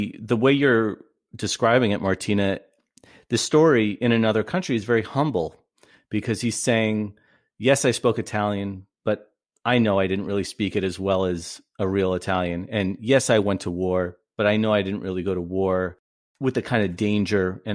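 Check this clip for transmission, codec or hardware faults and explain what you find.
No faults turn up anywhere in the recording. The speech runs without any event that would point to a problem in the chain that carried it.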